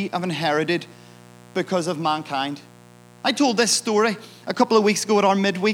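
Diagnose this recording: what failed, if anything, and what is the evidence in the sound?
Analogue wiring fault: a steady, raspy mains buzz sits well below the speech throughout, a ladder of 60 Hz harmonics from switching spikes coupling into the line.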